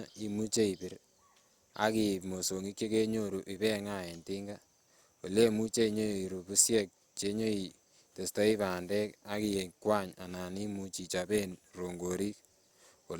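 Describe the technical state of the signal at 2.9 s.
At 2.9 s the speech is intact, with no technical fault present at that moment.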